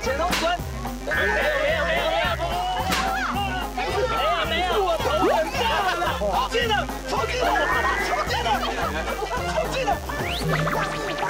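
From start to finish, switching spikes from a dimmer, rectifier or poorly shielded cable have leaked into the signal path, producing mains buzz locked to a 50 Hz supply. Because the interference arrives as sharp pulses twice per cycle, it carries a dense series of 50 Hz harmonics reaching into the kilohertz range. The result is a constant, raspy buzz sitting roughly 20 dB below the wanted sound, never letting up across the whole clip.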